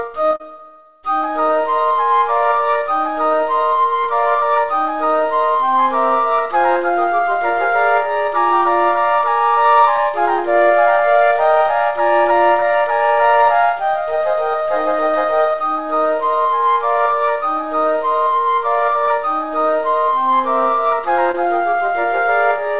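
Short concealed packet loss occurs six times, at 0.36 to 0.41, 4.03 to 4.08, 9.96 to 10.00, 12.60 to 12.63, 19.05 to 19.09 and 21.31 to 21.35 s. Each gap of 20 to 40 ms is patched by extending the preceding sound, giving a brief smear or wobble. The call path itself, band-limited to 4 kHz in a way that fits G.711 telephony coding, adds its normal narrowband character.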